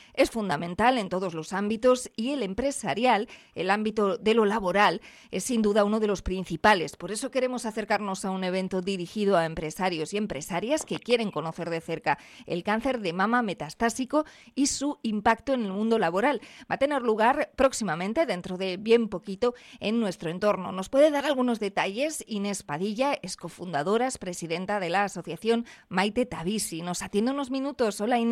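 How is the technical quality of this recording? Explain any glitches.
The technical quality of this recording is sound, with no glitches to explain.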